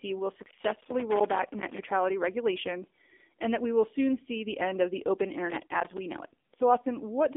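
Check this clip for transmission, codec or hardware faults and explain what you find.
Two faults are present: AMR narrowband mobile codec damage through the whole clip, and a burst of loose connector crackle near the start.

Throughout the clip, the speech has passed through an AMR-NB mobile link. The line band runs from about 250 Hz to 3.6 kHz, and nothing above 3.7 kHz survives. The low-rate vocal-tract model, whose buzzy, synthetic quality fits roughly 7.4 kbps, leaves the speech thin and plainly coded.

From 0.40 to 1.79 s, a loose connector crackle occurs. A worn or dirty contact repeatedly makes and breaks the circuit, chopping the signal on and off. The result is an irregular scratchy crackle laid over the speech for about 1.4 seconds.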